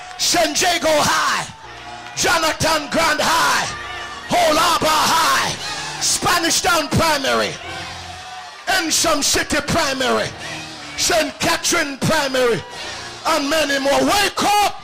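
From 0.47 to 1.66 s and again from 5.29 to 6.77 s the sound runs about 6.4% fast, rising roughly a semitone (107 cents) before snapping back. From 10.78 to 11.42 s it runs about 6.4% slow, dropping 114 cents. A drift correction step is the likely cause, where clock-matching software briefly resets the playback rate to refill or drain its buffer.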